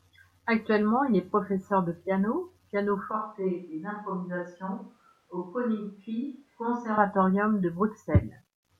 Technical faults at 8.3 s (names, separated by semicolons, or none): none